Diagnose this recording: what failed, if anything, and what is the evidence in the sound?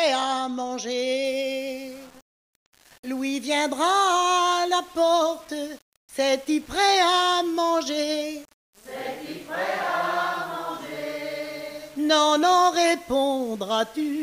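From 1.25 s to the end, grainy distortion tracks the sound, roughly 30 dB down, unlike steady hiss: likely low bit depth without dither, rounded to 7 bits during sample-format conversion.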